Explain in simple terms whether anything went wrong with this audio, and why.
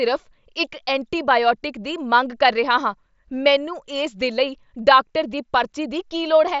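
Nothing went wrong here: the speech simply comes through a Bluetooth headset link using the mSBC codec, which is why the sound tops out just under 8 kHz, and that's how that kind of connection normally sounds.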